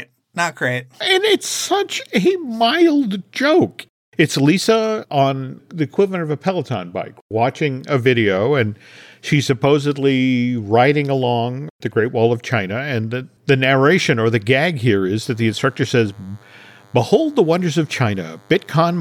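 At 15.21 s, just after "or the gag here", a DECT cordless phone buzz starts and runs to the end at 19.01 s. A DECT handset or base station nearby sends short radio bursts 100 times a second. Something in the audio path rectifies that energy, and it turns into sound. The result is a thin, steady buzz at 100 Hz, rich in harmonics. It sits well below the speech, roughly 35 dB down.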